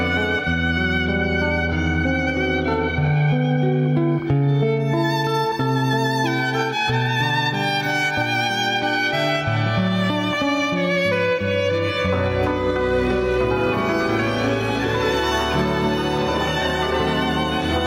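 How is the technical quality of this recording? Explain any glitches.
The recording has one fault, gain pumping, present throughout. Gain is likely set too high with a fast limiter clamping each loud sound, so the gain swings by about 10 dB, leaving the sound squashed.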